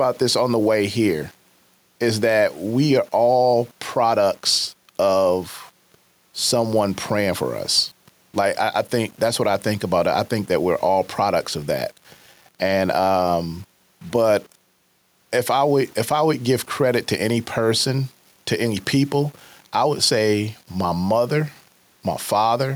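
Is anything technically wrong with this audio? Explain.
Yes. Two faults run through the whole clip of speech.

Low bit depth without dither: from start to finish the speech carries a gritty, grainy edge that rises and falls with the voice itself, and the quietest trailing sounds break up into a sputter rather than fading smoothly. This is likely heavy rounding to very few levels with no dither to randomise the error, which fits an 8-bit signal. The resulting distortion sits only about 35 dB under the speech and tracks it closely.

Gain pumping: the level breathes throughout. The background, room noise about 44 dB below the speech, is normal, and the gain swings by a few decibels, while loud and soft passages sound pressed toward the same level. The likely cause is input gain set far too high for the microphone, with a fast limiter or compressor clamping down on every loud moment and releasing in the gaps.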